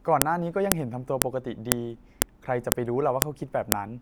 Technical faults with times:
0.22 file header played as audio
0.72 file header played as audio
1.22 file header played as audio
1.72 file header played as audio
2.22 file header played as audio
2.72 file header played as audio
3.22 file header played as audio
3.72 file header played as audio

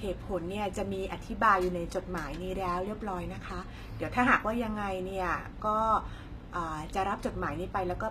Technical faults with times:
0.00-8.10 HE-AAC compression

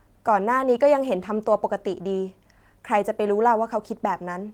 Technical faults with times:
none

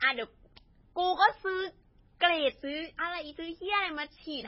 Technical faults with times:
0.00-4.47 MP3 compression

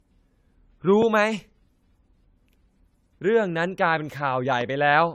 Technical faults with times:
0.00-5.14 generation loss
1.02-1.04 loud pop

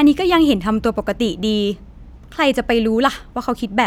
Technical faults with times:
none

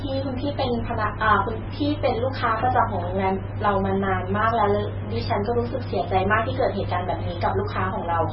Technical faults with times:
0.00-8.32 MP3 compression

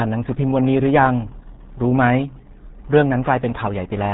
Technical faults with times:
0.00-4.14 RealAudio 14.4 codec

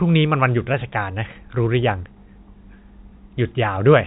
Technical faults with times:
none

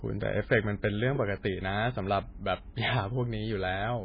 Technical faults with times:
0.00-4.04 MP3 compression

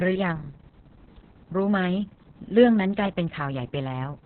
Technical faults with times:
0.00-4.25 Opus voice compression

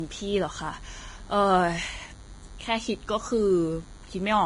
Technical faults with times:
0.00-4.46 DECT cordless phone buzz
0.00-4.46 Vorbis compression

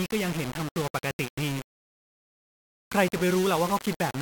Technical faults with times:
0.00-4.21 low bit depth without dither

